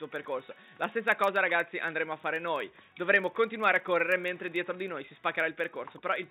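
A steady, rough buzz at 25 Hz runs through the whole sound and rises and falls with its level. It is a filter restarted on every block: the filter's state is reset every 40 ms, so each block opens with a small transient.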